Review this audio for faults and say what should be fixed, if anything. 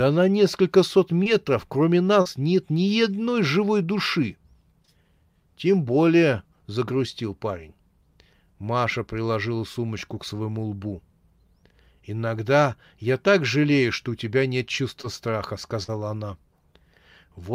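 Brief smears interrupt the speech at 1.23 to 1.27 s, 2.21 to 2.27 s just before "нет ни одной живой", 4.85 to 4.89 s right after "ни одной живой души", and 15.01 to 15.05 s after "что у тебя нет". Each is short concealed packet loss. Roughly 20 ms of audio (40 ms at 2.21 s) never arrived in time, and the decoder extended the preceding sound for 19 to 38 ms before blending back into the real signal.

At 15.83 to 15.90 s the last sound is held on and then jumps ahead. This is a burst of packet loss. About 40 ms of consecutive audio was lost or arrived too late, so the receiver kept repeating the last sound for 45 ms while turning it down, then resumed further on with that stretch of speech gone.

To prevent both, give the call path a steadier network or a larger jitter buffer, and add forward error correction or redundancy so that lost packets can be rebuilt instead of masked.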